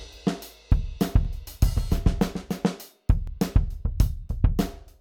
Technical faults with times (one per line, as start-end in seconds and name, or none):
1.25-1.27 overlapping chunks
3.27-3.30 overlapping chunks